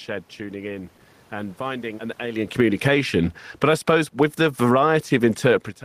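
Right after "tuning in and", at 1.62 s, the automatic gain starts falling, easing the level down by about 8 dB until 2.89 s, room noise sinking with it. It happens again from 3.48 to 5.45 s, about 4 dB this time: the control judged the input too loud, or its background noise too strong, and pulled back.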